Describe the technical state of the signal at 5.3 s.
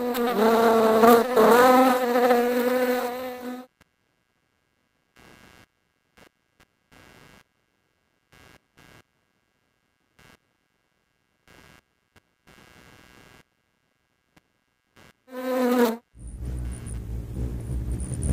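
At 5.3 s there is computer activity noise, present across the whole clip. Processor, graphics or mouse load disturbs the audio circuit's shared ground. It sounds like a buzzy chirping around 150 pulses per second, roughly 35 dB below the signal, following the computer's activity rather than the sound.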